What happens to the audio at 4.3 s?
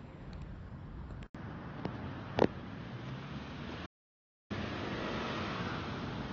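At 4.3 s the audio is in the middle of an audio dropout to silence, which runs from 3.86 s to 4.50 s, about 0.64 s in all. The input was most likely lost, while the recorder kept writing silence. The sound stops dead and returns abruptly, and the gap holds no room tone at all. On the waveform it is a flat line. On a spectrogram it is an empty vertical band, with sharp edges on both sides.

Around that gap, the audio is still on a poorer input device, which took over at 1.27 s and stays in use to the end. An 80 ms silence marks the switch. The change most likely came from the system moving to a narrower, noisier input. Nothing reaches above 6.6 kHz, so the sound is dull and boxy, at roughly the same level as before. A new noise floor sits about 40 dB below the signal. A spectrogram shows a hard ceiling at 6.6 kHz from 1.27 s onward, with a faint, even haze underneath.

AAC compression is present here as well, as it is throughout the clip. 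The damage is plainly audible and fits a low rate of about 24 kbps, likely AAC-LC. Its own cut-off of 11.8 kHz is hidden behind the device's narrower band at this point. Its traces are a smeared, warbling, fizzy texture on sustained sound. On a spectrogram these show as blotchy, patchy energy with small holes between bands.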